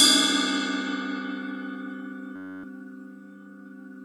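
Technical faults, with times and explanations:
2.36–2.64 s, system hang loop: the sound abruptly turns into a steady, pitched buzz near 94 Hz for about a quarter of a second. The computer or its audio driver stalled while the output hardware kept replaying the same tiny stretch of its ring buffer, a 10.67 ms fragment repeated 26 times, which fits a 512-sample buffer. Because the fragment is so short, the repeats fuse into a tone rather than a stutter. About a third of a second of the real audio is lost.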